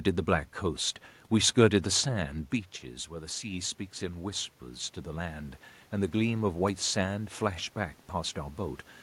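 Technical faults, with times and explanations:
3.1 to 8.86 s, automatic gain rising: after the talker moves back from the microphone around 2.5 s, input drops by about 10 dB, and the gain control slowly raises its gain by about 6 dB, so voice and room noise swell together.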